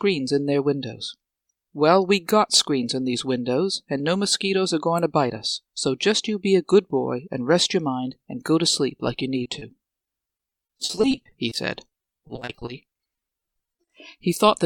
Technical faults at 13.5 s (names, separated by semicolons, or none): repeated packet loss (robotic sound)